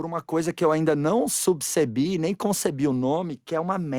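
Speech, with a block size mismatch (truncated) throughout. A 46.9 Hz buzz marks each dropped block end, which fits 1024-sample blocks. The pace is unchanged.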